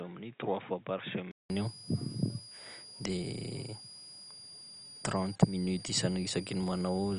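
Input switched to a poorer device, from 0.0 to 1.5 s: the opening stretch of speech sounds boxy and dull, with nothing above 3.8 kHz, sits about 5 dB quieter, and carries its own faint noise floor roughly 40 dB below the speech. At 1.5 s a gap of about 0.19 s of silence separates it from the fuller sound that follows, most likely because the recording switched from a narrowband headset or secondary microphone back to the main input.

Switching supply whistle, throughout: a thin, high tone sits between 4.78 and 4.91 kHz, wandering within that band instead of holding one pitch, at around 20 dB below the speech. The drift is what a switching power supply produces when its regulation frequency shifts with load, or when two supplies beat against each other, leaking into the audio path as a steady, slightly unstable whine.

MP2 compression, throughout: the speech has a plainly audible gurgling, granular roughness, and nothing is present above 11.2 kHz, giving an overall dull top end. 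This points to MPEG Layer II coding at a low rate, which fits roughly 48 kbps. With so few bits, the coder shuts off the upper sub-bands entirely and quantises the remaining ones coarsely, so bands flicker in and out and the texture turns watery.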